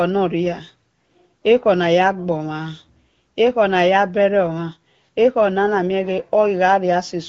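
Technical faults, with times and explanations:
No technical faults can be heard in this speech.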